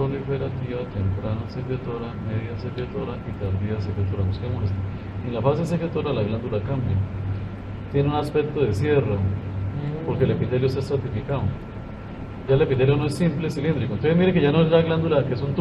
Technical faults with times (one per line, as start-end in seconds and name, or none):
none